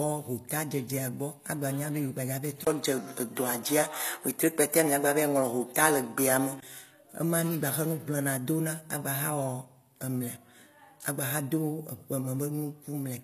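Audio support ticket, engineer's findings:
HE-AAC compression, throughout: gritty, metallic sibilants, nothing above 14.9 kHz. Likely cause: spectral band replication rebuilding the treble from copied lower bands, so harmonics misalign above the crossover. Damage fits a low bitrate near 24 kbps.

Input switched to a poorer device, 2.65–6.62 s: 20 ms dropout at the switch, band capped at 13 kHz, level shifts about 5 dB, faint new noise floor. Likely cause: fallback to a narrower-band microphone, switched just before "ema mì".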